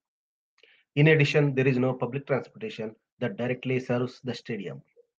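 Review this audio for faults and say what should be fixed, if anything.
Clock drift between sender and receiver runs through the whole clip: the sending side's audio clock is about 4 percent fast relative to the playback side. Samples therefore arrive faster than they are consumed, and the jitter buffer keeps filling. The receiver has to throw material away to keep latency from growing, so the speech never sits on a steady time base. To prevent it, lock both ends to a common clock or add adaptive resampling that tracks the rate difference.

Repeated timing corrections occur from 0.05 s to 5.16 s. To keep pace with the 104 percent incoming rate, the receiver keeps cutting short pieces out of the speech. Every edit is a removal, so they all push in the same direction, but they fall at uneven intervals. Each cut is small. To prevent it, replace the discard-based catch-up with smooth, continuous sample-rate correction.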